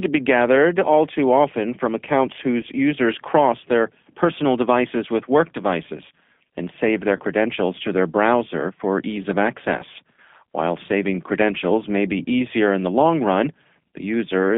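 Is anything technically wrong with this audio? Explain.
Yes. Throughout, the speech carries the sound of the G.729 codec at 8 kbit/s. It rebuilds each 10 ms frame from a vocal-tract filter, pitch predictor and a few pulses, so voices sound rough and synthetic. A spectrogram shows energy confined to roughly 200 Hz to 3.5 kHz, with nothing above.

VoIP packet loss concealed by the speech codec occurs twice, from 2.61 to 2.65 s, after "too often from accounts" and before "users cross their personal", and from 7.17 to 7.21 s, after "devices and save their" and before "to their browser for". About 20 ms of audio is missing each time, which fits a single lost packet. The decoder extends its last pitch and filter, giving a brief buzzy tone or coloured noise that fades. On a waveform this looks like a repetitive, decaying stretch; on a spectrogram, like the last frame's spectrum frozen in place.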